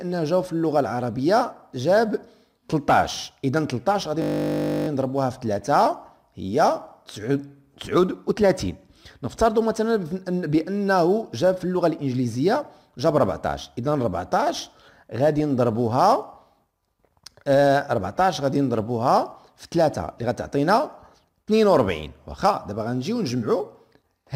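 At 4.22 s the system hangs and the audio hardware keeps replaying the same stretch of its ring buffer, a system hang loop lasting until 4.88 s. A 20 ms slice repeats 33 times, which fits a very short buffer. Cycling at 50 Hz, the slice fuses into a steady, flat buzz at that rate rather than a stutter. When playback resumes, essentially no audio appears to be missing.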